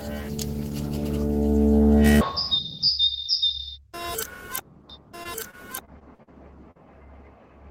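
From 4.90 s to the end, a second path likely captured the same audio again and mixed it back in, so a full-band copy about 5 dB quieter trails the original by roughly a second, with no decay or room colour, and cuts in abruptly as a doubled track. Between 5.23 and 6.29 s, packets went missing again and again, six holes with the longest about 44 ms, and the receiver patched each by extending the last sound, giving choppy, robotic repeated packet loss across about 15% of that stretch. At 6.71 to 6.77 s, a further short concealed packet loss drops about 40 ms, which was filled by continuing the preceding sound and blending back, heard as a brief smear or wobble.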